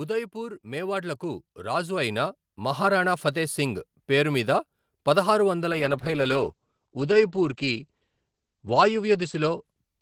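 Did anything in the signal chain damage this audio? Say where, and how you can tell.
Yes. In call processing, automatic gain rising appears from 0.32 to 3.88 s: the speech and the background noise floor swell together by about 12 dB over several seconds, ending just before "పేరు మీద పదహారు వందల". The AGC judged the input too quiet and raised its gain step by step. Because the noise rises in lockstep with the speech, it is a gain change in the chain and not the talker getting louder or moving closer.

At the network and codec stage, a call bitrate drop begins at 5.73 s, right after "పేరు మీద పదహారు వందల", and lasts to the end of the clip. The bandwidth estimate fell, so the Opus encoder went from 32 kbps to 10 kbps and stayed near that floor for about 2.8 s. It coded more coarsely and cut the audio band from 20 kHz to 8 kHz, so the sound turns muffled and rough. Unlike a fixed low-pass in the wiring or converter, the dullness starts at a specific moment and comes with coding grit.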